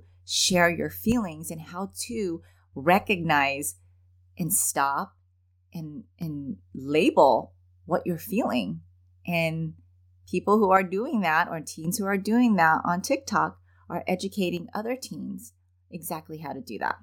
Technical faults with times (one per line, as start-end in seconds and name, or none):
1.12-2.73 one channel drops out
4.70-6.22 one channel drops out
10.77-11.85 one channel drops out
14.57-16.89 one channel drops out